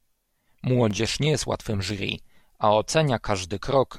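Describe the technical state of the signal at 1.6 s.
Clock drift buffer slips, 0.91 to 3.90 s: regular clicks every 1.0 s, likely from two drifting device clocks dropping or repeating a few dozen samples.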